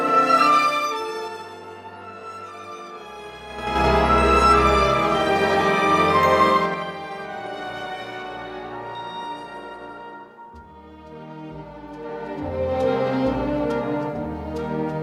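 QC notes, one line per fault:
0.60–1.54 s, 3.50–3.84 s, 6.49–6.91 s, 11.95–12.80 s: zipper noise. The level moves in unsmoothed jumps of 2, 6, 2 and 1 dB, about ten a second, through changes of roughly 20 dB down, 20 up, 10 down and 10 up. Each jump ticks audibly.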